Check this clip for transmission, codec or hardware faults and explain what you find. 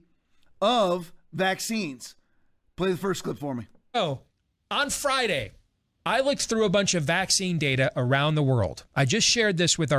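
Nothing in this speech recording points to a fault of any kind. There is nothing to report or explain.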